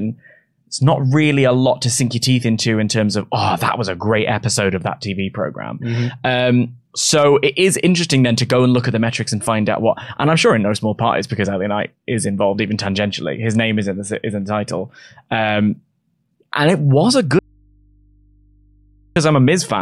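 At 17.39 s, right after "and it was a", the speech cuts out abruptly and only a low mains hum, roughly 35 dB below the voice, fills the 1.77 s gap until 19.16 s. This audio dropout to a faint residue likely comes from the signal feed breaking while the downstream input stayed open.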